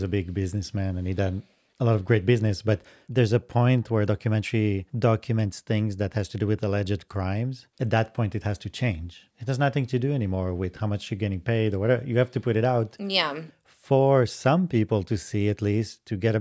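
No technical faults are audible.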